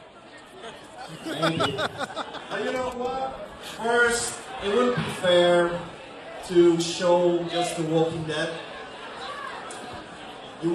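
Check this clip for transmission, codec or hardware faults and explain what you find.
One transmission fault: from 2.15 to 8.15 s the adaptive stream drops to a lower bitrate after the connection slows. Treble above 12.3 kHz vanishes and synthetic, codec-smeared highs appear, which fits a step from roughly 96 to 16 kbit/s. Unlike a dropout, the quality changes abruptly with no gap.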